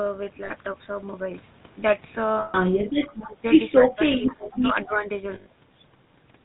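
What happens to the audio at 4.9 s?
Right around there, from 4.86 to 4.94 s, a faint, short scrap of the talker comes back about 271 ms late, sitting very low under the live speech. That's most likely an echo leak: someone's on a loudspeaker, their echo canceller didn't fully scrub what the mic picked up from the speaker, and the leftover got sent back down the line as a delayed copy.

That same stretch also carries the GSM full-rate codec coloring the whole clip. The codec rebuilds the voice from a vocal-tract model fed by a sparse, regularly spaced pulse train, so you get that gravelly, buzzy grain, and nothing comes through above 4 kHz. The damage here is plainly audible, and the sound fits the old 13 kbps GSM full-rate codec.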